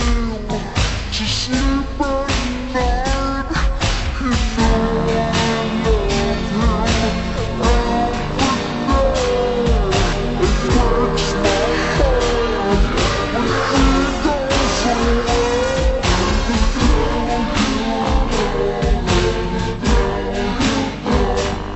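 From start to finish there's a wrong sample rate: everything runs at half speed and sits a full octave, 12 semitones, low. Speed and pitch drop together with no conversion, which fits 44.1 kHz material played back at 22 kHz.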